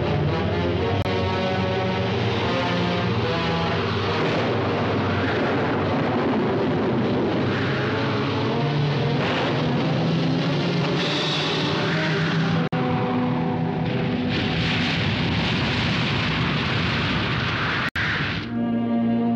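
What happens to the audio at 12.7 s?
From 12.68 to 12.73 s the sound cuts to 50 ms of silence, then picks back up. That's a Bluetooth stall, likely interference starving the headphone buffer of packets.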